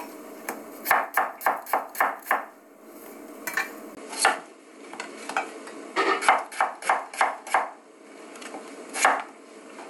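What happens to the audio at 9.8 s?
Input switched to a poorer device, from 3.95 s through to 9.89 s. The input likely changed to a narrower-band device, so nothing remains above 11.4 kHz. The sound is duller, with a faint new noise floor and no obvious level jump, following a 20 ms gap at the switch.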